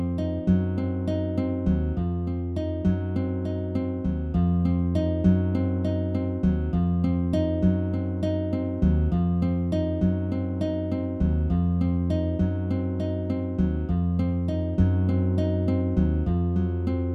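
Nothing goes wrong anywhere in this recording, so there's no fault to point to at any moment.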